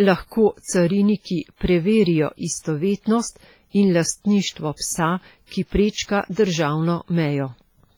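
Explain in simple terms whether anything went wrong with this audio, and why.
Yes, the speech is heavily damaged all the way through, most likely by WMA compression. Each syllable carries a ringing, washy smear and a hiss that swells and fades with the speech. That breathing is what separates it from steady background noise.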